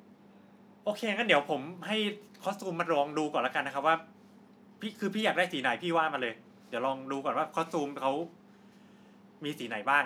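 A speech recording, and nothing is technically wrong with it.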